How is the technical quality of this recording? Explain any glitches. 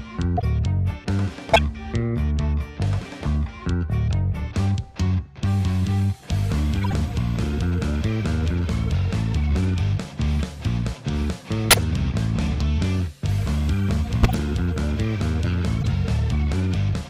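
The recording is marred by six short glitches, all of the same kind: corrupt frame decoded. Bits inside compressed frames were damaged, and the decoder played those frames anyway, misreading gains and codes so energy lands at the wrong frequencies. Each event spans a few frames, heard as a brief chirp or noise burst peaking around about -10 dBFS (about -15 dBFS at 6.81 s). They fall at 0.37–0.44, 1.53–1.59, 6.81–6.93, 11.71–11.79, 14.23–14.37 and 15.81–15.85 s.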